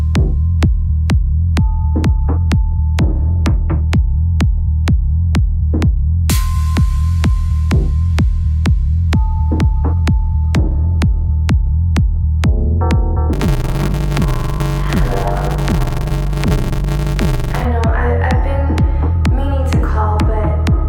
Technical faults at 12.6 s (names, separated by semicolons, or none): none